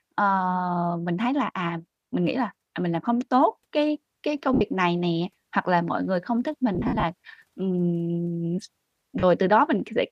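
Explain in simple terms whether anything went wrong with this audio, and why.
Lost LE Audio frames, at 4.54 s, 6.75 to 7.03 s and 9.19 s. Bluetooth sends speech in small packets, and here some never arrived. The decoder covered each gap by replaying a noisy copy of the last sound. Just after "tốt cái cái công" (and before "này nè hoặc là") there is a 70 ms smeared patch. Following "mọi người không thích", drop-outs scatter over roughly 280 ms, the longest lasting about 70 ms. A brief 40 ms blur comes at 9.19 s.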